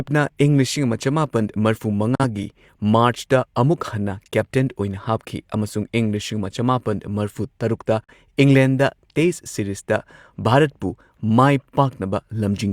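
Right after "ꯂꯤꯁꯤꯡ ꯑꯃ ꯆꯃꯥꯄꯟ ꯃꯔꯐꯨ", the speech drops out from 2.15 to 2.24 s, and it happens again from 8.04 to 8.14 s, just after "ꯆꯃꯥꯄꯟ ꯃꯔꯐꯨ ꯇꯔꯨꯛꯇ". Both are a digital broadcast dropout. The receiver got a bad frame and muted with a quick 3 ms fade rather than play garbage. Each gap loses about 43 ms of audio, which fits a single failed frame. You hear a tiny clipped-out hole before the speech picks up again.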